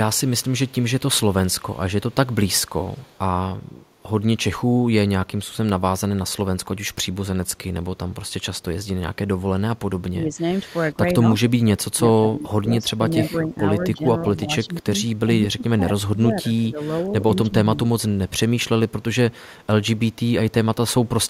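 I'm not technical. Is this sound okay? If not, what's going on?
No. Early on there is an echo leak. The other person is likely listening on a loudspeaker, and their phone's echo cancelling didn't fully remove your own sound picked up by their microphone, so some of it was sent back. You hear it as a faint, delayed copy of the speech, trailing about 0.17 seconds behind, from 0.28 to 0.72 seconds and again from 2.31 to 3.19 seconds.

Later comes speech suppressed in double talk. When both sides talked at once, the echo canceller likely couldn't tell the talker apart from the loudspeaker echo and turned everything down. The speech dips or briefly drops out in pieces at 10.12 to 12.48, 12.8 to 13.58, 13.93 to 14.86, 15.26 to 16.8 and 17.35 to 17.89 seconds. The drops are deepest in the first and fourth stretches, each losing about a second in total, and milder in the others.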